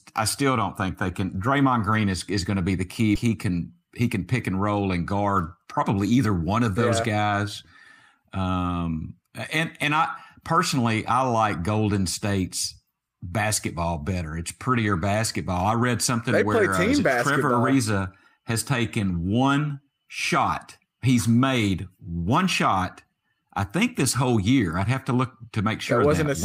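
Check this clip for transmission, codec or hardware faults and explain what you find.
Two transmission faults occur close together in the first five seconds of this speech.

Skip ahead, 3.15 to 3.25 s, right after "to be the key": roughly 0.7 s of audio was discarded while later packets were already queued, so playback jumps forward. The two sides are butted together with only a few milliseconds between them, which leaves an abrupt cut with nothing audible in its place.

Jitter buffer speed-up, 3.74 to 4.18 s, just before "pick and roll and": the buffer was still holding more audio than its target, so it trimmed short pitch-period pieces, removing about 50 ms in total. The speech plays at 110% speed with unchanged pitch and sounds briefly hurried.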